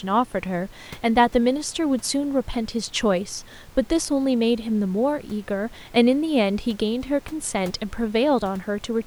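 No technical faults can be heard in the speech, and the only other sound is the room's own background noise, sitting about 26 dB below the speech as part of the recording.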